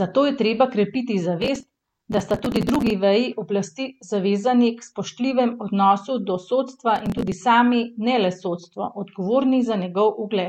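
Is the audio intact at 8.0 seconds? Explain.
Yes, the speech at 8.0 seconds is intact, with no audible fault at that moment.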